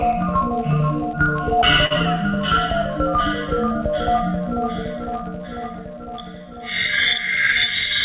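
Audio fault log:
1.86 s, short stall from a late packet: the music hangs on one sound for about 46 ms with a faint buzz or dip. A late packet left the jitter buffer empty, so the last sound was stretched until the audio caught up.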